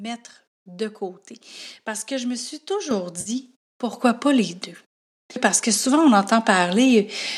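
At 2.91 s the level of the speech jumps up by about 6 dB in a single step, and the background rises right along with it. That's the classic microphone volume stepped up case: the call software decided the mic was too quiet and bumped the device's input gain all at once rather than easing it in. It doesn't affect the sound's character. Everything just gets abruptly louder.

Just after that, from about 3.21 to 3.30 s, there's a brief smeared, noisy and phasey patch lasting roughly 50 ms. That's AAC frame loss with concealment. A run of coded frames went missing, which fits about five of the short 10 ms frames this stream seems to use, and the decoder filled the hole by reusing the last good spectrum. That's why it smears rather than dropping to silence. The surrounding sound has a faint grainy edge, likely from low-delay AAC at a modest bitrate.

Then at 3.93 s the microphone volume is stepped up again, another abrupt jump of about 6 dB, with the speech and background lifting together just as before.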